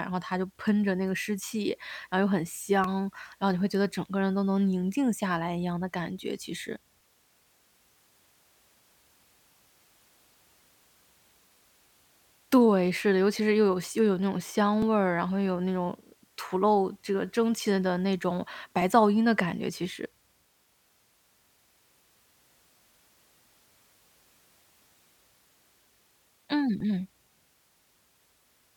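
A recorder or processor handling the speech in chunks of about 4 s likely drops a few milliseconds each time it hands over, so audio is missing between chunks, giving brief butt-joined skips at 2.84, 14.82, 18.82, 22.81 and 26.80 s.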